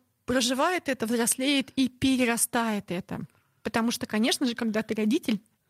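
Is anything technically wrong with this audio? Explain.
No, nothing in this speech clip points to a technical problem. No dropouts, glitches or other recording or playback faults can be heard anywhere in it.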